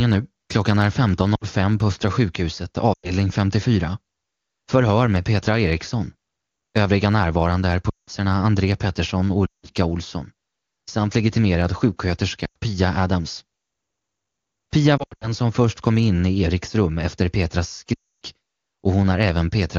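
Lost AMR speech frames occur at 1.35–1.44, 2.93–3.11, 7.90–8.10 (after "närvarande är"), 9.46–9.67, 12.45–12.56, 14.98–15.29 (scattered, before "som först kom in") and 17.94–18.14 s. The decoder stretches the last good sound and fades it, so each gap drops to near silence. On a spectrogram, the harmonics flatten into smooth, fading bands. On the waveform, the envelope shrinks.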